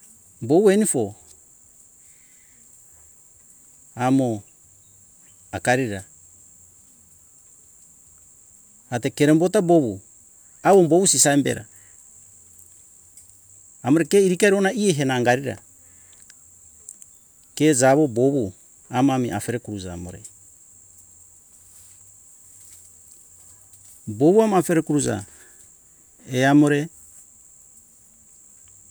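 No technical faults are audible.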